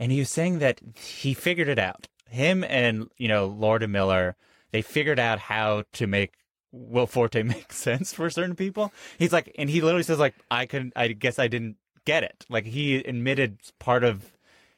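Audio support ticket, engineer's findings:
Engineer's findings: no audio fault found in the speech clip attached to this support ticket.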